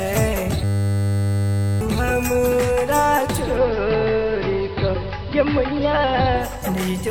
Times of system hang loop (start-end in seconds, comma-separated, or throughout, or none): 0.64-1.81